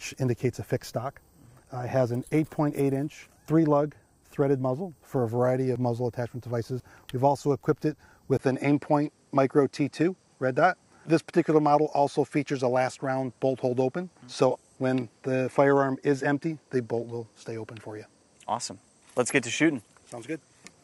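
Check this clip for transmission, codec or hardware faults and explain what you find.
One fault is present. From 8.37 s to the end, after a 20 ms gap, the audio turns duller, with nothing above 11.4 kHz and a faint new noise roughly 50 dB down at much the same level. This is likely an input switched to a poorer device with narrower bandwidth.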